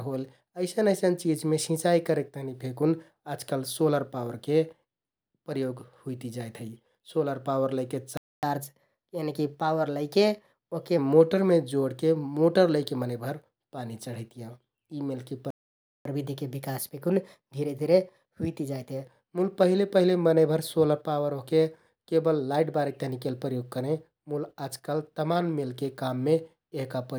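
At 8.17 s, just after "सोलर पावर लैके", the speech cuts to silence for about 0.26 s. This is a playback stall, likely caused by the player's buffer running dry or its output thread being blocked. The speech resumes at 8.43 s with a catch-up at higher speed. The player drains its backlog by resampling at 1.1 times normal speed, which raises the pitch by roughly one and a half semitones. The speech sounds slightly hurried and higher until 10.98 s, when normal rate returns just before "मोटरमे जोडके मोटर लैके".

The same pattern recurs with a longer gap. A second playback stall silences the speech from 15.50 to 16.05 s, about 0.55 s, again likely from buffer underrun or a blocked thread. A 1.1× catch-up with the same pitch lift then runs from 16.05 to 19.05 s, ending just before "मुल पहिले पहिले मनैंभर".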